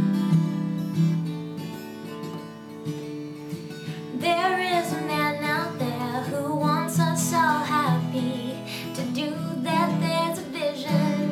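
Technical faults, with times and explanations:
Nothing here stands out as a technical fault; the audio carries on steadily without anything going wrong along the way.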